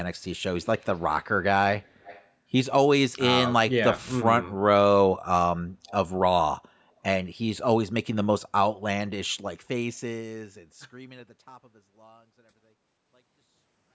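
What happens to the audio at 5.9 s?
Around 5.87 to 5.91 s there's a brief echo leak: a faint, delayed copy of the speech, roughly 30 dB down and trailing by about 279 ms. It's likely from the far end's loudspeaker bleeding into its microphone past an echo canceller that didn't fully remove it.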